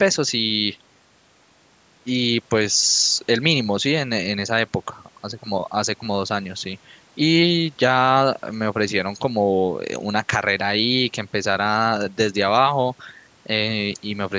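No technical faults can be heard in this speech clip at any point.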